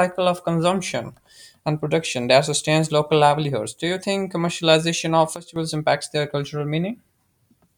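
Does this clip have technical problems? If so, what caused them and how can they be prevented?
Yes: at 5.36 s the speech and background noise drop together by about 13 dB until 5.56 s, a sudden gain jump likely from a gain change applied without a ramp. Smoothing every gain change over a few milliseconds prevents it.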